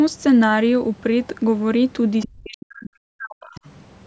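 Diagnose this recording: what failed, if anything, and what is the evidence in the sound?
Call processing is where this one went wrong. There's other side's voice leaking through in two short scraps, at 2.22 to 2.28 s, roughly 15 dB under the talker, and 3.56 to 3.7 s, fainter at about 25 dB down. That's most likely far-end loudspeaker sound the echo canceller didn't fully strip from the mic.

Right between those, from 2.26 to 3.58 s, the talker's own level sinks hard, bottoming out around 40 dB down over roughly a second and a half. That's speech suppressed in double talk: with both sides going at once, the canceller likely couldn't tell the talker from echo and ducked everything.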